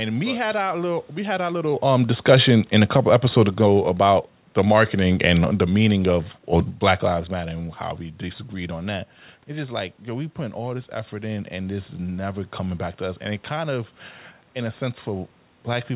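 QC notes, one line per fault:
1.83–6.28 s, automatic gain falling: after "we had our little", the gain control judged the input too loud or its background noise too strong and lowered gain by about 5 dB, so speech and background sink together.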